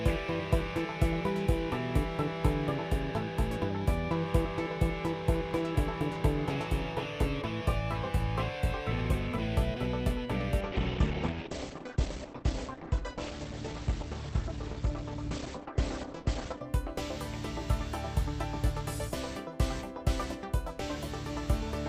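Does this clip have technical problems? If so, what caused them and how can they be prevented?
Yes. From 10.61 to 16.61 s an adaptive stream at a lower bitrate takes over. Everything above 8.6 kHz vanishes and artefacts thicken, which points to Opus falling from 64 to 16 kbit/s. Unlike a dropout, the switch is abrupt but leaves no gap. A steadier connection or a deeper playback buffer prevents it.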